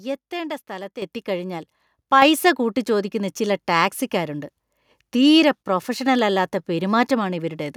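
Microphone volume stepped up: the input gain was raised in single jumps, at 1.02 s after "എത്തേണ്ട സ്ഥലത്ത്" by about 8 dB, and at 2.22 s before "കൂട്ടിച്ചോദിക്കുന്ന ചില ടാക്സിക്കാരുണ്ട്" by about 5 dB, so speech and background suddenly get louder together.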